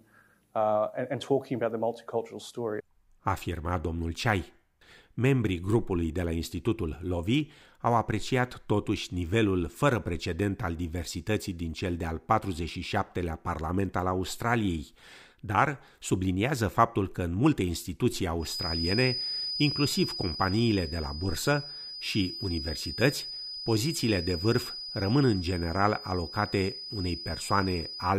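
A feedback whistle runs from 18.38 s to the end of the speech at 28.19 s, likely from a loudspeaker-to-microphone loop held right at the edge of feedback. A thin, steady 5 kHz tone sits roughly 10 dB beneath the speech, swelling and fading slowly in level without ever building up.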